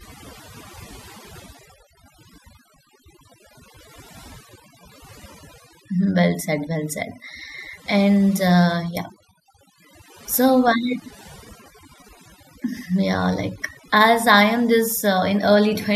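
From start to finish the speech carries overdone noise removal. A noise reduction stage was driven too hard, so any frequency band sitting close to its noise estimate gets pulled far down or shut off entirely. Quiet components of the voice fall below that threshold and are removed along with the noise. The background drops and breaks up into twinkling specks.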